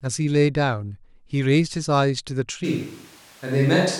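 At 2.66 s the speech turns abruptly roomy and hollow, losing some of its low end, and stays that way to the end of the clip. The loudness barely changes, but a bed of room noise sits roughly 30 dB below the speech. This is a switch to a distant microphone: the close microphone's signal likely dropped out and the recording fell back to a mic further from the talker, so it picks up more of the room's reflections and noise.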